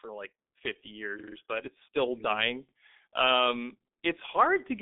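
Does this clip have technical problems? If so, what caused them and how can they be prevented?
Yes: G.723.1 codec compression throughout, at a rate fitting about 6 kbit/s, strips everything above 3.7 kHz, leaving muffled, hoarse speech with blurred consonants. Prevent this by choosing a wideband, higher-bitrate codec.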